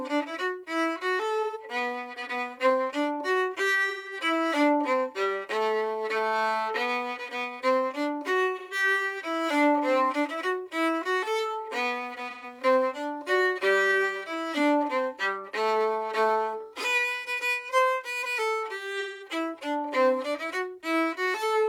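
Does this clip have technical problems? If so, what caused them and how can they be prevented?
Yes. AAC frame loss with concealment occurs at 1.42, 3.89, 8.58, 12.29 and 18.995 s. Each gap lasts about 128 to 213 ms, consistent with three to five lost frames. The decoder papers over each one by reusing and scrambling the last good spectrum, so it sounds like a brief smeared, phasey wash rather than the hard silence or click of a raw dropout. Prevent it with reliable transport, error protection or retransmission for the AAC stream.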